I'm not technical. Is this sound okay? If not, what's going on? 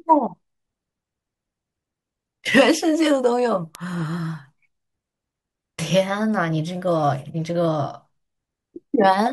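No, there's a problem. From about 0.58 s to 8.82 s there's a steady run of small sharp ticks, roughly one every 0.7 seconds, around fifteen in all, some louder than others. These are word clock ticks. The speech passed over a digital cable into a device keeping its own time, and the two clocks drifted apart by a tiny amount. Each time they slipped past each other, a single sample got dropped or doubled, which makes a tick.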